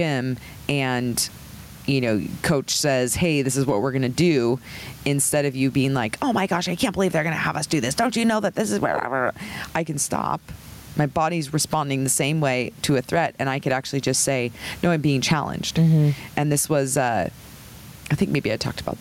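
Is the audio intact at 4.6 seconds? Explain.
No. At 4.6 s, as throughout the speech, there is gain pumping, with the gain swinging around 15 dB; the room noise sits about 38 dB below the speech. This likely comes from excessive input gain driving a fast limiter, which also squashes the dynamics.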